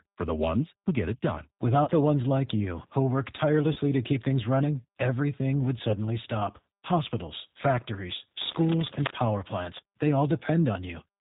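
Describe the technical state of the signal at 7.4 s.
At 7.4 s the speech carries G.729 codec damage, present throughout the clip: each 10 ms frame is rebuilt from a vocal tract filter, pitch predictor and sparse pulses, which fits 8 kbit/s. It sounds plainly rough and synthetic, and a spectrogram shows nothing above 4 kHz.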